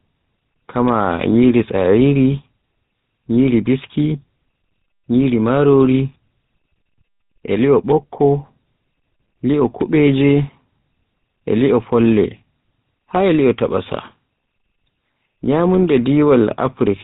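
Tandem speech coding runs through the entire speech clip: the signal was decoded and re-encoded at each link border, so every coder worked on the previous one's damaged output. The roughness, muffling and watery warble build on each other. Nothing survives above about 3.8 kHz. The buzzy, gritty texture fits a GSM full-rate coder at the end of a chain that passed through two speech codecs in succession, with G.726 at 40 kbit/s before it.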